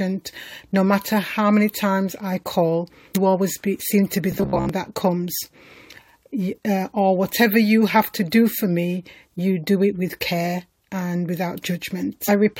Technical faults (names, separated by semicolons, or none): damaged data in a compressed stream; robotic sound from repeated short buffers